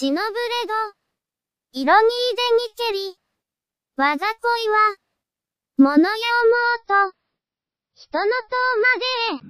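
At 6.41 s the adaptive stream drops to a lower bitrate, which fits a step from about 128 kbit/s to 24 kbit/s. Everything above 5.9 kHz vanishes abruptly and codec artefacts rise, with no gap.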